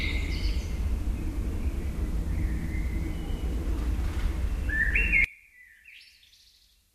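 At 2.67 s and again at 4.91 s, damaged data in a compressed stream produces a brief glitch as the decoder misreads corrupted frames and resynchronises. From 5.24 s to the end, the everyday sounds drop by about 28 dB, likely one channel inverted, cancelling common content in the mono sum.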